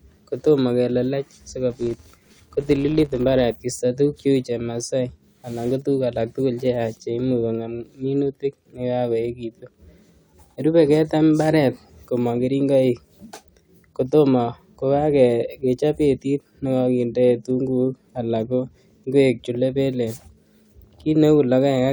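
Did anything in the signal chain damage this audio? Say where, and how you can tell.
Yes. A filter in the buffer-processing stage restarted on every block, losing its state and starting each one from silence. From 1.70 to 3.56 s, just after "kotomo kelelech", a 188 Hz buzz tracks the speech level, which fits a 256-sample block.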